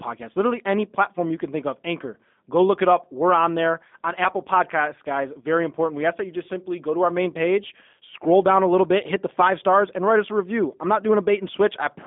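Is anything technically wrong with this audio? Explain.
Yes, there are two faults.

The G.729 codec affects the whole clip. The speech is rebuilt from a vocal tract filter, a pitch predictor and a few pulses per short frame. The damage is plainly audible: the voice sounds rough and synthetic, confined to roughly 200 Hz to 3.6 kHz, which fits an 8 kbit/s G.729A line.

VoIP packet loss concealed by the speech codec occurs from 5.41 to 5.45 s. About 20 ms of audio went missing, consistent with one lost packet. The decoder filled the gap by extending its last pitch and filter at falling gain, so that moment turns briefly stretched and weak before the voice recovers.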